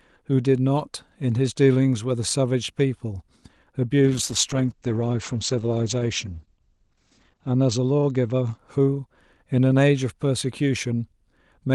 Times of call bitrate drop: 4.02-8.63

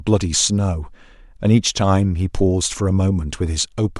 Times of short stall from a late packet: none

